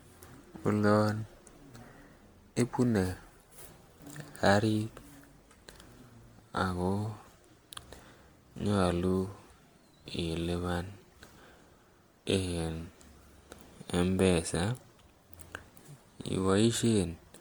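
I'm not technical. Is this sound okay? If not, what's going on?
No. Generation loss runs through the whole speech clip. It sounds swirly, smeared and hollow, and the starts of sounds are blurred. It was likely saved as a compressed file around seven times over, which fits repeated MP3 copying, with each round adding fresh damage.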